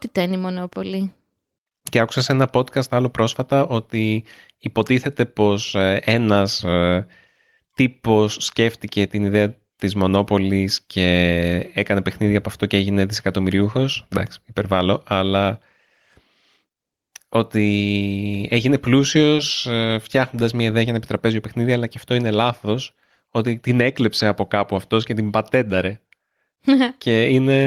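No technical faults are audible anywhere in the recording.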